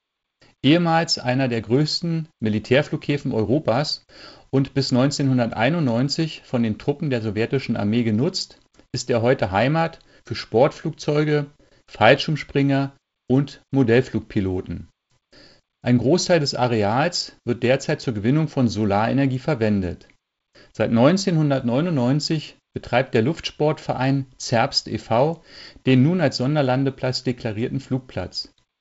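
Nothing stood out as a fault on listening; the wideband telephone coding comes through as expected, with the sound reaching only to about 7.7 kHz.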